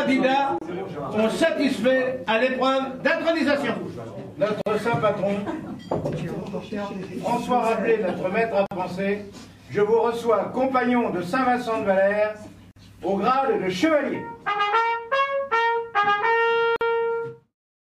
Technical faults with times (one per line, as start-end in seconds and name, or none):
0.58-0.61 gap at a join of encoded pieces
4.61-4.66 gap at a join of encoded pieces
8.66-8.71 gap at a join of encoded pieces
12.71-12.76 gap at a join of encoded pieces
16.76-16.81 gap at a join of encoded pieces